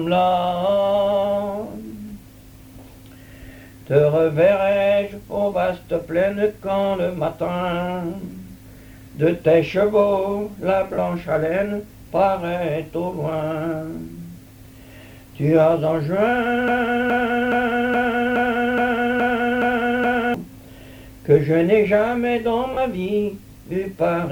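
At 10.94 s and again at 22.73 s, lost LE Audio frames drop about 40 ms of the Bluetooth stream, which fits four 10 ms LC3 frames. The decoder fills each gap by reusing the last spectrum with scrambled signs, so both spots become a brief noisy smear.

From 16.68 s to 20.34 s, a stream or player that likely stalled keeps resending its last fragment, producing a broken-record loop. A 0.42 s piece repeats exactly nine times back to back, and the audio due in that stretch never plays.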